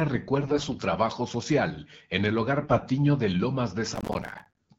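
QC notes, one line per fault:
0.42–0.78 s and 2.62–2.82 s, AMR bit errors: The voice keeps roughly its pitch and loudness but turns hoarse, scratchy and gargly. Flipped bits in the weakly protected parts of each frame misplace the excitation pulses and skew the fine pitch, gain and spectral values. The damage points to several percent of bits in error across roughly 18 and 10 codec frames. On a spectrogram the harmonics smear and break into noisy, blotchy energy while the overall envelope stays in place. The waveform shows no gaps.
3.95–4.59 s, processor overload crackle: A dense, gritty tearing rides on the sound and then stops. The processor kept missing its deadlines, and each missed buffer was filled with silence, leaving a tiny hard-edged hole. The spacing fits buffers of about 5 ms, with around fifty missed. The waveform shows many short silent dropouts with abrupt edges. On the spectrogram these appear as closely packed vertical broadband clicks. 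The mild AMR wideband coding at 12.65 kbit/s sits underneath throughout.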